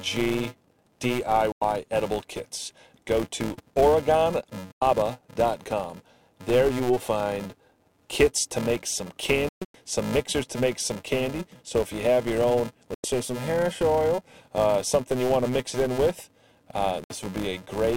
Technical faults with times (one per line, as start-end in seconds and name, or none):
0.00-17.97 filter restarted on every block
1.52-1.62 digital broadcast dropout
4.73-4.82 digital broadcast dropout
9.49-9.75 digital broadcast dropout
12.94-13.04 digital broadcast dropout
17.04-17.11 digital broadcast dropout